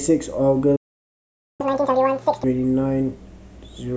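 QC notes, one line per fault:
0.76–1.61 s, playback stall: the speech cuts off mid-flow and the output falls completely silent for about 0.83 s before sound resumes. The likely cause is the player running short of buffered data, or its audio thread being held up, so nothing reached the output until it recovered. The gap sounds like a hard dropout rather than a pause in the speech, because the sound stops abruptly instead of trailing off.
1.61–2.44 s, catch-up at higher speed: as soon as the speech returns it runs at twice normal speed, with pitch raised by roughly ten semitones, giving a rushed, chipmunk-like quality. The player is resampling its backlog to win back the time lost in the stall, so speed and pitch climb together rather than independently. At 2.44 s the speech drops back to normal rate and pitch once the lost time has been made up.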